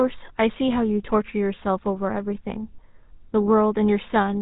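GSM full-rate codec damage runs through the whole speech clip, from start to finish. The codec rebuilds the voice from a vocal-tract model excited by a sparse, regularly spaced pulse train, so fine detail in the excitation is lost. The result is a plainly audible buzzy, gravelly roughness on every stretch of speech. The band stops near 3.8 kHz, leaving the sound muffled and boxy, and the rate heard fits a 13 kbps stream.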